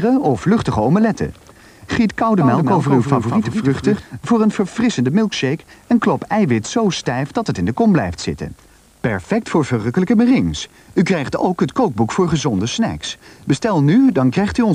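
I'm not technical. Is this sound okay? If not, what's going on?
No. From about 2.40 to 4.02 seconds there is a doubled audio track: the same sound plays twice, with a second, noticeably quieter copy trailing about a fifth of a second behind. It is a clean duplicate with no fading tail, and it switches on and off abruptly at those two points. The likely cause is the audio being picked up a second time through a slower route, or an edit that left two copies out of step.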